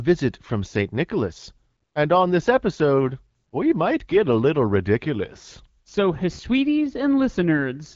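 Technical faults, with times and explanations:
No technical faults occur in this speech clip, so there are no times or explanations to give.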